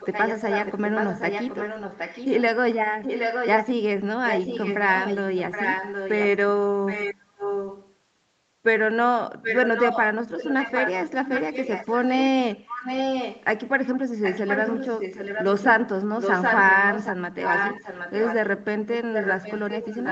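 Echo leak runs from 0.0 to 3.65 s, 4.26 to 6.27 s, 6.86 to 7.94 s, 9.42 to 13.45 s, 14.23 to 18.48 s, and 19.13 s to the end. A copy of the speech trails it by 772 ms, about 5 dB quieter, likely from a loudspeaker whose echo canceller let its microphone pickup travel back down the call.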